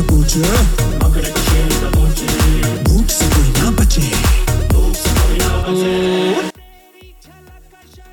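From 6.50 s to the end, one channel is likely inverted. Summed to mono, the shared content cancels, dropping about 29 dB to a faint residue.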